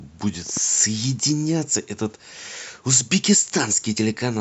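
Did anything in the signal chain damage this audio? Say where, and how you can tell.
Yes, at the codec stage: compressed frames skipped at 3.96 s. The speech jumps ahead by about two frames, roughly 50 ms, which fits frames of about 26 ms. Overlapping frames smear the join into a brief blip. The waveform shows a discontinuity, and the spectrogram shows a thin vertical seam.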